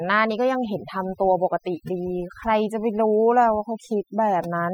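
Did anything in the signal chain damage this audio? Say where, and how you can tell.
Yes. Overdone noise removal at the call-processing stage runs through the whole speech clip. Gaps fall to near silence with twinkling specks, and quiet parts of the voice are lost as bands near the noise estimate are cut. A spectrogram would show scattered, isolated time-frequency dots.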